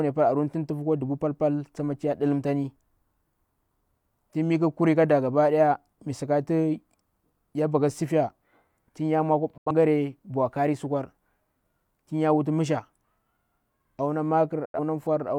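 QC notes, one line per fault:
9.58–9.71 s and 14.65–14.79 s, digital broadcast dropout: the speech cuts abruptly to silence within about 3 ms, twice, then resumes mid-stream. The receiver muted on corrupt or missing frames, which fits roughly two lost frames each time. That material is gone.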